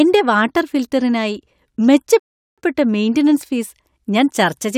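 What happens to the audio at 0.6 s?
Nothing goes wrong at 0.6 s; the speech plays through that point intact, with no dropout, click or distortion.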